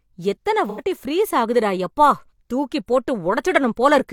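From 0.69 to 0.81 s, before "ஃப்ரீஸ் ஆகுது டா யப்பா", AAC frame loss with concealment leaves a smeared, noisy patch. The decoder refilled the gap from the last good spectrum, which fits two lost frames.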